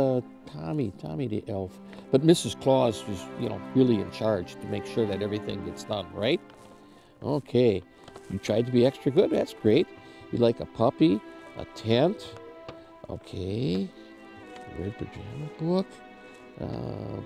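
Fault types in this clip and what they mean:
Drift correction step: from 14.43 s to 16.64 s the sound slows by 5.68% and drops 101 cents, just over a semitone, with speed and pitch falling together, then snaps back to normal at the end of that stretch. The likely cause is clock-matching software between two devices changing the playback rate in a single step to refill or drain its buffer, instead of adjusting gradually, which produces this sudden detuning.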